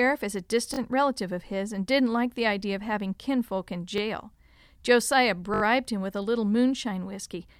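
It's a speech clip with three repeated buffer stutters, where playback ran dry and replayed the last 20 ms-sized chunk. At 0.74–0.78 s after "is a" it repeats twice, at 3.98–4.00 s after "of having kinfolk in" once, and at 5.54–5.62 s before "him with a little" four times. Each repeat has a hard join, but no audio seems lost.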